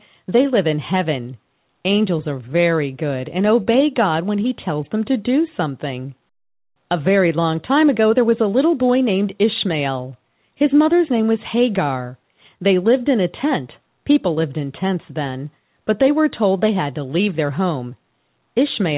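Short concealed packet loss occurs at 3.62 to 3.68 s, then at 14.34 to 14.38 s. About 40 ms, then 20 ms, never arrived. The receiver extended the previous sound, leaving brief smears in the narrowband audio, cut off at 4 kHz.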